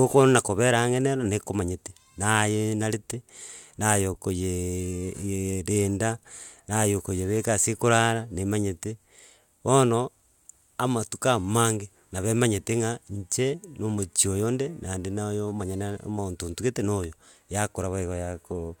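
No technical faults occur at any point in the recording, so there is nothing to describe in time order.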